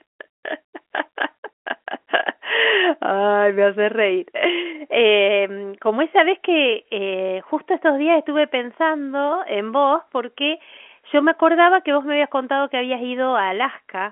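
No technical faults are present in the speech, which carries the expected telephone-line character of G.711 coding, with its band running from about 250 Hz to 3.4 kHz and nothing audible above about 3.7 kHz.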